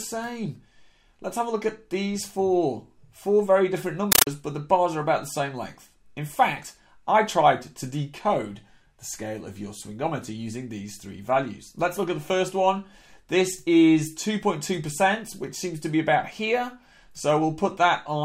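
From 4.12 to 4.27 s the audio gives way to loud, chattering static, bursts of about 9.3 ms repeating 31.25 times a second. This is a compressed stream played as audio: Dolby Digital data, which fits a 448 kbps AC-3 stream, was taken as ordinary samples instead of being decoded.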